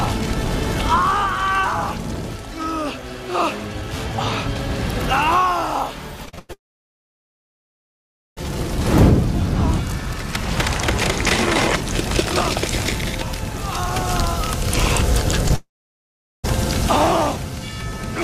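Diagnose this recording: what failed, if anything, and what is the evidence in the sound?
Repeated packet loss (robotic sound) at 6.25 to 6.51 s, a network fault. Four gaps, the longest 99 ms, leave about two thirds of this quarter-second synthesized. Each hole is bridged by extending the previous sound, giving a choppy texture with pieces missing.

At 6.53 to 8.39 s, 1.84 s of audio is absent, about 1.79 s of it heard as silence after a brief fading continuation. The same happens at 15.56 to 16.46 s, where 0.88 s is missing and about 0.78 s is silent. The likely cause is a long network dropout, with the receiver concealing only the first moments before going quiet.

Short concealed packet loss at 15.49 to 15.52 s, again in the network path. About 20 ms failed to arrive in time, and the decoder filled the gap by continuing the preceding sound before blending back, which produces a brief smear or wobble just ahead of the second dropout.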